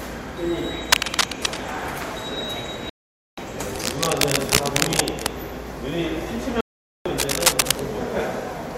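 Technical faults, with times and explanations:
0.92–1.59 s, 3.76–5.29 s and 7.18–7.82 s: cable scratch noise. Dense, uneven bursts of crackle ride over the sound, somewhat louder than it, while the sound itself continues underneath. This is likely a worn cable or connector whose contact resistance flickers as it moves. Unlike a dropout, nothing is lost.
2.90–3.38 s and 6.61–7.06 s: digital broadcast dropout. The sound cuts to silence for 0.48 s and then 0.45 s before resuming further along, because the receiver muted while frames failed. Those spans fit about 15 and 14 lost frames. The clean holes, with no added noise, set this apart from the scratching.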